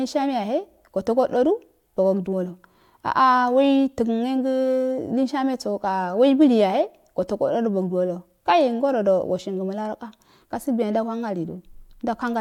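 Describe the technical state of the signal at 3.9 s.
At 3.9 s the speech signal is intact, with no dropout, distortion, clipping or other technical fault audible at that point.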